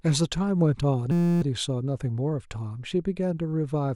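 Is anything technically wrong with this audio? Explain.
Yes. From 1.12 to 1.42 s the speech turns into a steady buzz, a system hang loop. The machine stalled while the hardware kept replaying one 5.8 ms chunk, which fits a 256-sample buffer. It repeats at 172 Hz, and about a third of a second of speech is lost.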